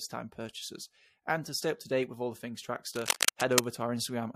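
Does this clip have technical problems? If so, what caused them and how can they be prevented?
Yes. A worn cable, connector or control was likely being moved, so its contact resistance jumped around and fed irregular bursts of noise into the signal. The result is cable scratch noise from 2.94 to 3.64 s, just after "with all the things": a dense, uneven scratching and rustling that sits somewhat louder than the speech for that stretch. To prevent it, replace or clean worn leads and connectors and keep cables still and strain-relieved while recording.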